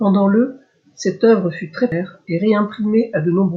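At 1.92 s, just after "cette œuvre fut très", there is damaged data in the compressed stream. Part of the encoded speech was corrupted. The decoder misread those frames and lost sync while hunting for the next valid header. The result is a brief glitch.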